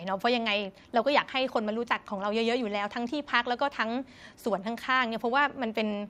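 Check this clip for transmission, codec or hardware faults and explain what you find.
No faults turn up anywhere in this speech recording. Nothing in it calls for a fix or an explanation.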